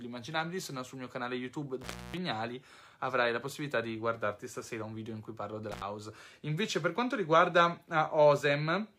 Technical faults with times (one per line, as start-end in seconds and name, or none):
1.81-2.17 intermittent contact
5.72-5.82 intermittent contact